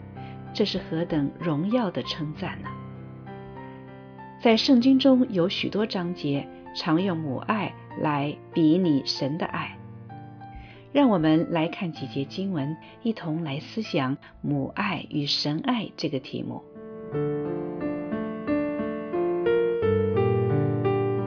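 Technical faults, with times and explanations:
No technical faults can be heard anywhere.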